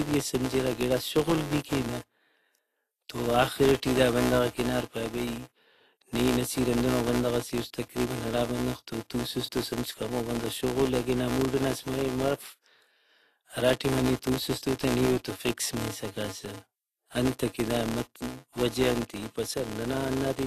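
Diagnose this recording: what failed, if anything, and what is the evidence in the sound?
The filter restarted on every block is a buffer or DSP-stage fault. A steady 188 Hz buzz runs under the whole clip and rises and falls with the speech level. That rate fits a 256-sample block. Each block restarts the filter from silence, so every block boundary gets a small tick.

The codec stage is the next suspect. The speech sounds hissy and grainy throughout, attacks are smeared, and there's nothing above 14.2 kHz. That's likely Vorbis compression at a low bitrate, around 38 kbps, with coarse treble quantisation turning fine detail into noise.

GSM signalling bursts leak into the analogue wiring from 3.45 to 4.17 s, just before "بندغاک ہنار پائے". You get a galloping dit-dit-dit of short 217 Hz buzzes, about 20 dB below the speech. A nearby phone's radio bursts are getting rectified by the audio circuit.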